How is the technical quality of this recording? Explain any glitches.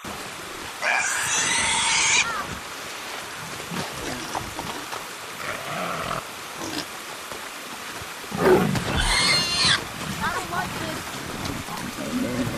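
There's a glitch running through the whole recording: timecode bleed. A chirping warble between roughly 1 and 2 kHz sits about 15 dB under the sound, leaking from a neighbouring timecode track and consistent with 29.97 fps code.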